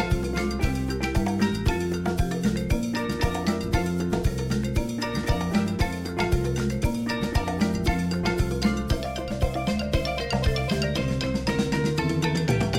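No technical fault can be heard anywhere in the clip. The audio holds steady throughout, with nothing in it that points to a problem in capture, transmission or playback.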